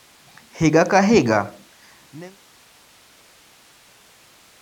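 Nothing here counts as a fault; the speech just eases away in a smooth fade-out that starts at roughly one and a half seconds and is done by 2.4 s, with no click or hard edge where it ends.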